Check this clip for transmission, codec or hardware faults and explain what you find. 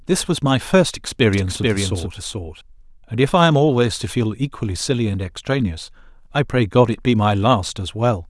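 One fault is present: a doubled audio track from 1.33 to 2.61 s. A second full-band copy of the speech trails by roughly 400 ms at about 5 dB lower, likely from a slower capture path or misaligned edit. Unlike room echo, it has no decay or colouring, and it starts and stops abruptly.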